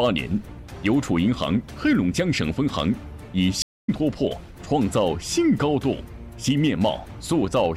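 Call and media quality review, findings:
Stream reconnect, 3.62 to 3.89 s. About 0.26 s of silence, then audio resumes roughly 0.15 s further on. Dropped connection, fresh decoder restarted mid-stream.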